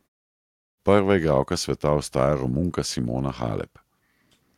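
No faults detected in this speech; the background drops to silence in the pauses and comes back in time for each phrase, with only very quiet sound lost.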